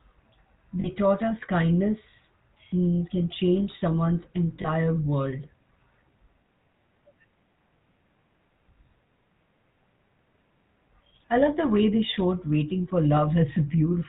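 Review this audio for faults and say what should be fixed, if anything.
The whole clip has the GSM full-rate codec's signature: a buzzy, gravelly roughness on the speech and nothing above 4 kHz, consistent with the 13 kbps full-rate mode. The codec rebuilds the voice from a vocal-tract filter fed by a sparse, regularly spaced pulse train, so fine detail in the excitation gets replaced by that grainy buzz, and here it's plainly audible. To avoid it, route the call through a wideband codec like AMR-WB or Opus instead of legacy GSM.

There are two short dropouts from lost GSM frames. The first runs from about 0.80 to 0.88 s, right before "taught us kindness mm", with roughly 40 ms of missing audio. The second is at 4.62 to 4.67 s, just after "mm can change someone's", with about 20 ms missing. In both spots the decoder covers the gap by repeating the last good frame, so you hear a brief rough, metallic ring instead of clean speech. 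Fixing it means making the radio link or transport more reliable, or adding jitter buffering and error protection so fewer frames arrive bad.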